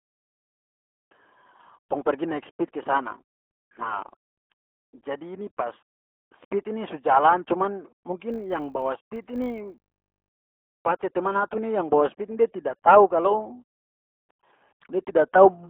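Speech coded through the RealAudio 14.4 codec at 8 kbit/s is squeezed into a telephone-like band of roughly 250 Hz to 3.4 kHz, with nothing above 4 kHz. The heavy coding damage leaves the speech muffled, gargly and thin throughout. From 8.3 s to 10.31 s, a filter restarted on every block resets its memory at each block boundary, so every block opens with a small click. Those clicks fuse into a 50 Hz buzz that rises and falls with the speech level, which points to blocks about 20 ms long.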